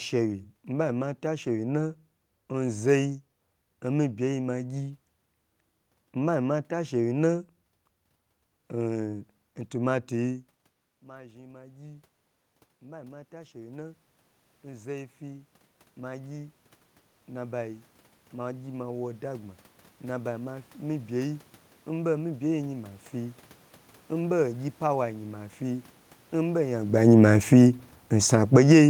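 Automatic gain rising from 9.02 s to 23.45 s: the gain control judged the input too quiet and kept raising its gain, by about 19 dB over those fourteen seconds, so the voice and the room noise behind it swell together rather than the speech alone getting louder. The talker's own shift in distance around 10.5 s sits inside this stretch.

Automatic gain falling from 26.93 s to 28.84 s: shortly after the talker moves again near 26.5 s, the control treats the level as too loud and pulls its gain down by about 12 dB, so the speech and its background sink together over those last two seconds.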